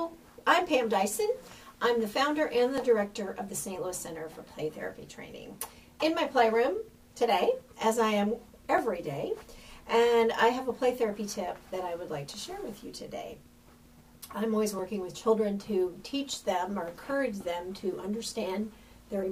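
At 2.78, 8.78 and 14.79 s you get a tiny stutter-click, and that's overlapping chunks: the audio was handled in 6-second blocks, each starting before the previous one finished, so roughly 6.5 ms gets played twice at every join.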